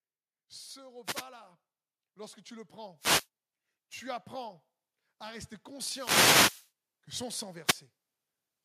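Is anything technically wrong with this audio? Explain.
Yes. Wireless microphone noise hits occur at 1.04–1.25 s and 5.91–6.70 s: the analogue FM radio link fades as reflections cancel, so receiver noise swells into a swish of static. Unlike a digital dropout's silent gap, the sound is masked by hiss rather than cut.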